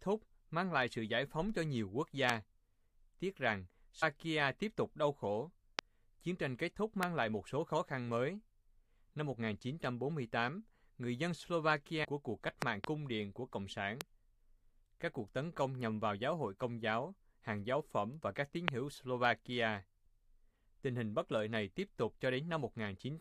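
Loud pops, likely voltage pulses from a plug, switch or static, hit at 2.30, 5.79 and 7.03 s, each about 25 dB above the speech, which continues underneath. They show as tall spikes on the waveform and full-height vertical lines on the spectrogram.

Damaged data in the compressed stream at 4.02–4.03 s, just before "tiếp tục đau khổ", and at 12.03–12.05 s, just before "của cuộc cách", throws the decoder off frame sync. Each gives a brief glitch, seen as a short broken patch on the spectrogram.

A pair of pops follows at 12.62–12.86 s, about 20 dB up. Single pops of about 25 dB come at 14.01 s and at 18.68 s, right after "phẩm và các tín".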